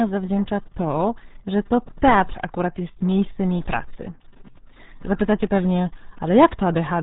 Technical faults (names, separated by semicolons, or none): RealAudio 14.4 codec